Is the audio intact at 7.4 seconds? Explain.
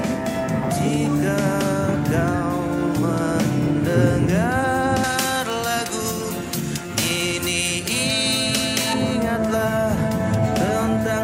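No. From 5.04 to 8.93 s pre-emphasis was left on, with the treble boost never undone, about 11 dB at 10 kHz, making the sound thin, bright and sibilant.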